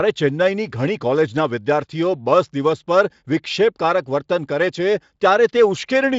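Speech, no faults: the audio carries the faint signature of the Speex codec, with content stopping near 7.7 kHz, and nothing beyond that.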